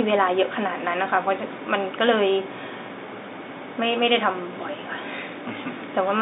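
A speech recording heard over a telephone line, with nothing technically wrong with it.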